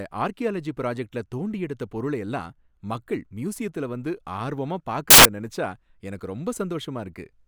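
At 5.10 to 5.25 s, just after "மக்கள் மியூசியத்துல வந்து ஆர்வமா" and before "நினைச்சா எனக்கு", the decoder assembles samples from the wrong bytes, turning rapidly varying low-order bits into the dominant part of each value. For about 0.15 s the speech becomes a burst of loud, harsh broadband noise.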